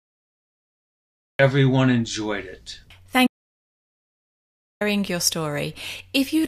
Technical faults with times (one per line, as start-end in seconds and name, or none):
0.00-1.39 cut-off start
3.27-4.81 audio dropout to silence